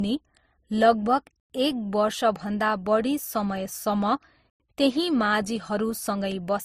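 Transcoding between lossy codecs runs throughout: the speech carries two layers of different artefacts heard together, likely from low-bitrate Opus re-encoded as MP3, with nothing above 15.3 kHz. Gaps between chunks fall at 1.40 to 1.50 s and 4.50 to 4.60 s, 100 ms silences after every three-second chunk.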